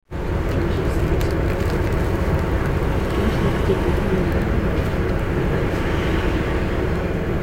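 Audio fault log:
No fault can be heard anywhere in this recording of sounds. Nothing in it calls for a time or range in this log.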